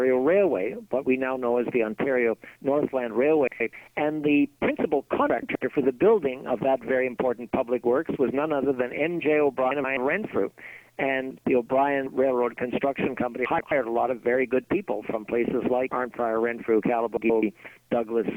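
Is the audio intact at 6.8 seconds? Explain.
Yes, the audio is intact at 6.8 seconds, with no dropout, click, distortion or other fault at that point.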